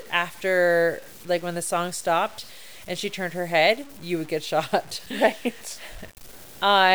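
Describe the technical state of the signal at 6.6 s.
At 6.6 s the speech carries the same grainy, signal-following distortion heard across the whole clip: low bit depth without dither. The grit sits only around 25 dB below the signal and thickens as the level falls, with the quietest tails breaking up or dropping out. The likely cause is samples truncated to very few amplitude steps, consistent with about 7-bit resolution, and no dither, so the rounding error tracks the waveform instead of forming a steady hiss.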